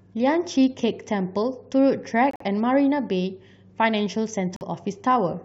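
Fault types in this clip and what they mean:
Corrupt frame muted: the decoder rejected corrupted compressed frames and silenced them, leaving abrupt holes of 0.11 s at 2.31 s and 0.08 s at 4.55 s.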